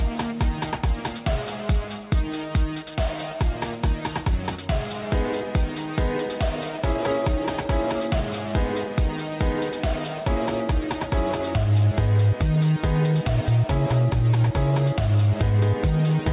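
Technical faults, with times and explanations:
No technical faults heard.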